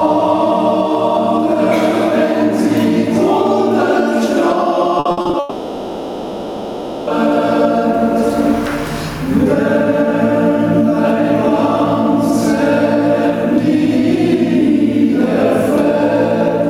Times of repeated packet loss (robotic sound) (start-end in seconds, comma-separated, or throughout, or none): 4.99-5.35